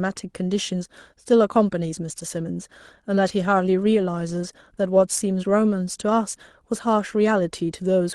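Right through the speech there's clock drift between sender and receiver. The sender's clock runs roughly five percent fast, so the jitter buffer keeps overfilling. From 0.01 s to 8.01 s come repeated timing corrections: the receiver trims short slices to keep up, heard as small, unevenly spaced hiccups and a slightly hurried pace, around 105 percent.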